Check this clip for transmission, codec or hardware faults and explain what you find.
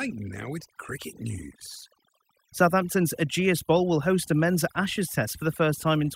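There's one problem, and it runs the whole length of the speech: overdone noise removal. A noise reduction stage was pushed too hard, so any frequency band sitting close to its idea of the noise floor gets pulled right down or switched off entirely. The quieter parts of the voice get caught in that too. You end up with a background that drops and breaks up into little twinkling, warbling specks.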